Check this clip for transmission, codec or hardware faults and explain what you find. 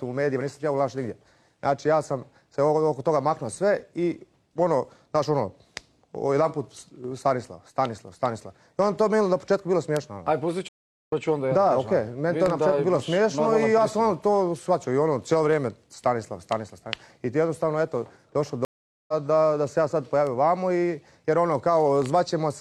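Two stream reconnects break the audio, at 10.68 to 11.13 s and 18.65 to 19.14 s. Each time the connection drops, the player falls silent for about 0.4 s, then restarts decoding mid-stream. Unlike a simple dropout, the sound resumes roughly a third of a second further on, so material is skipped.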